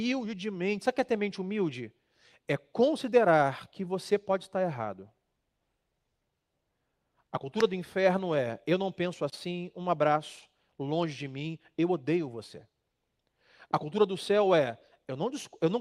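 No technical faults are audible.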